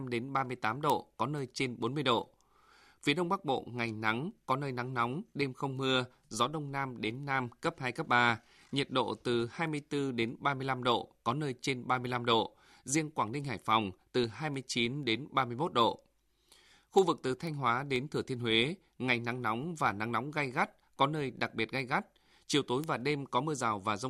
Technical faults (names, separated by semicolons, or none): word clock ticks